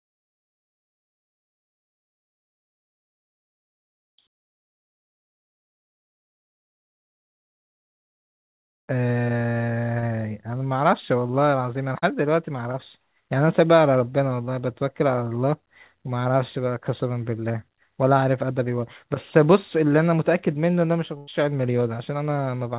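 Short concealed packet loss occurs at 9.99 to 10.04 s, 11.98 to 12.04 s and 12.72 to 12.76 s. Audio did not reach the decoder in time, about 40 ms at the first two points and 20 ms at the third. The receiver filled each gap by extending the preceding speech and then blended back into the real signal. Each is heard as a brief smear or wobble in this band-limited speech, which carries nothing above 4 kHz.

A burst of packet loss runs from 21.18 to 21.29 s. About 100 ms of consecutive speech was lost or arrived too late to play. The receiver extended the last sound across nearly the whole gap and faded it as the gap continued, so a voiced sound turns into a held buzz and unvoiced sound into a dying hiss. The speech then resumes further on, and the stretch in between is missing.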